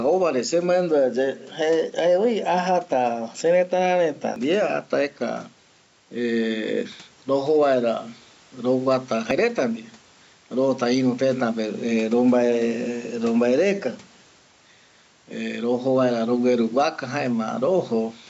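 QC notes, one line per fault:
Throughout: gain pumping. The level rises and falls by about 5 dB with each loud stretch of speech. The low room noise sits about 37 dB under the speech. Loud and quiet passages sit closer together than they should, and the result sounds squashed. This is likely from input gain set far too high, with a fast limiter or compressor pulling it down on every peak.
4.36 s, 9.31 s, 14.26 s: audio missing between chunks. At each point a short piece of sound, roughly 50 ms, drops out and the audio on either side is butted together with no silence, so the speech skips forward abruptly. The three skips recur about every 5 seconds. That regular spacing points to a recorder or processor working in 5-second blocks and likely losing a sliver of audio each time it closes one block and starts the next.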